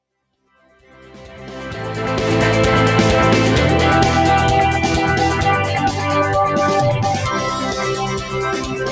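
A noise suppressor meant for speech stays on across the whole clip. It treats steady parts of the sound as noise and keeps pulling them down. The level swings by roughly 5 dB. Held sound pumps and thins while attacks pass through.

The first sound cut by the noise suppressor comes at 5.72 to 6.06 s. The dip is brief and drops by about 6 dB at its deepest. A second cut runs from 6.97 s to the end. It drops by about 10 dB.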